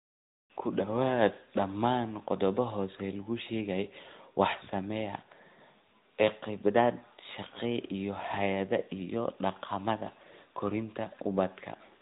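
From start to finish the speech carries AMR narrowband mobile codec damage, and it's plainly audible: nothing gets through above about 3.8 kHz, so it sounds boxed-in and phone-like, with a buzzy, synthetic edge that fits a mid-rate mode around 10.2 kbps.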